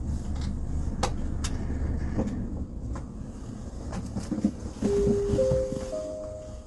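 Throughout, the sound is grainy and rough, with nothing above 11.6 kHz. This is likely low-delay AAC compression at a low bitrate near 32 kbps, whose short frames blur fine frequency detail. A spectrogram shows a flat ceiling at 11.6 kHz and speckled noise between components.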